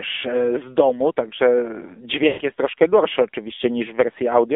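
From the start, the speech is carried by the AMR narrowband mobile codec, with a 250 to 3600 Hz line band and nothing audible above 4 kHz. The voice is plainly buzzy and synthetic, which fits a low 7.4 kbps mode, where a vocal-tract model driven by sparse pulses stands in for the real waveform. This differs from a simple low-pass filter, which would dull the sound without adding this artificial, reconstructed texture.

From 2.28 to 2.42 s, about 120 ms, there are lost AMR speech frames, consistent with a run of about six 20 ms frames. The decoder repeats the last good pitch and vocal-tract settings at falling gain, so the sound stretches and fades toward silence instead of stopping abruptly. It then resumes, briefly weak and rough, at "jest troszkę gorszy". A plain dropout would cut to silence at once, with no smeared tail.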